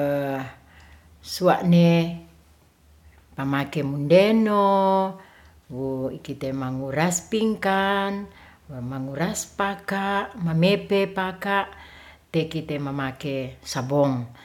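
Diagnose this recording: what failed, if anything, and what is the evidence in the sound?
Nothing in this speech recording points to a failure at any stage of the chain. No audible evidence singles out a stage for attention, so there is nothing to diagnose.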